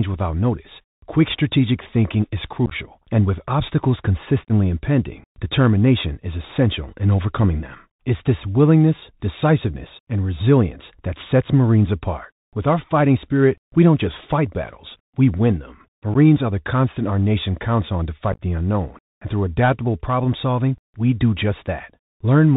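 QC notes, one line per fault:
Throughout: Bluetooth CVSD headset codec. Speech is plainly narrowband, with nothing above 4 kHz, a granular hiss underneath, scratchy s sounds and distortion on loud bright syllables. The one-bit 64 kbps delta coder's adaptive step cannot keep up with fast high-frequency swings.
2.66–2.73 s, 4.44–4.52 s, 16.14–16.16 s, 18.32–18.41 s: unconcealed Bluetooth headset packet loss. Speech breaks into short, abruptly edged holes that sound like a chopped crackle. The first comes after "quick strategic thinking is" and loses about 41 ms of audio in gaps scattered over 53 ms, with the longest gap 15 ms. The second loses 45 ms over 60 ms, with one run of 30 ms. The third loses about 11 ms after "battles we win them". The fourth, after "nation counts on to", loses about 53 ms over 68 ms, with runs up to 15 ms. The first two clusters fit roughly ten lost packets each, the fourth about fifteen, and the brief one about three. 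Small voice packets between headset and phone were dropped and silence or an idle pattern was left in their place, so nothing smooths over the holes.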